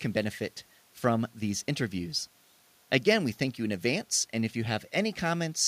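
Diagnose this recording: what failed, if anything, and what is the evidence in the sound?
Nothing failed; no stage of the chain shows a fault.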